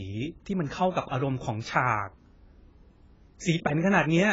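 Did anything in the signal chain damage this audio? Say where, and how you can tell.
Yes, at the codec stage, throughout the speech: nothing is present above 7.5 kHz, and the heavy smearing with a warbling texture points to likely AAC compression at a bitrate around 16 kbps. Starved quantisation, not a simple low-pass filter, explains that warble.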